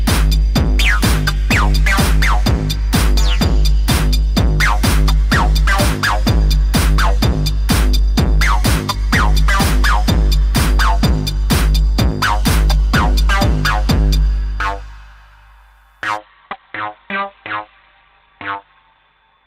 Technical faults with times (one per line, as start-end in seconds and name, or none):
16.17-19.46 adaptive stream at a lower bitrate